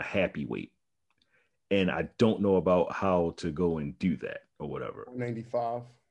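No technical faults can be heard anywhere in the speech. There is nothing to place on the timeline.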